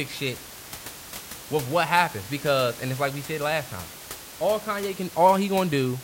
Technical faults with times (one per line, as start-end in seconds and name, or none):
none